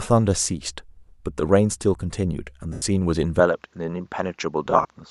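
Lost LE Audio frames at 2.73 to 2.82 s: about 90 ms of audio went missing, and the decoder filled the gap by repeating the last spectrum with scrambled phase, so the speech smears into noisy hiss before fading.

Input switched to a poorer device, likely, from 3.40 s to the end. With no gap and no level change, the sound abruptly loses everything above 7.6 kHz and gains a faint new noise floor about 45 dB down, turning duller.

Lost LE Audio frames again from 4.65 to 4.85 s: about 110 ms went missing, scattered over 200 ms in short runs of up to roughly 30 ms. This produces brief grainy smears rather than one dropout.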